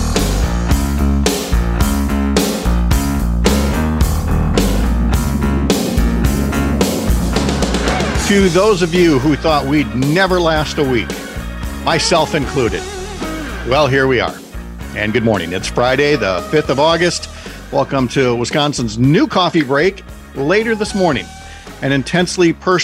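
No technical faults can be heard anywhere in the recording. The sound stays continuous and consistent throughout.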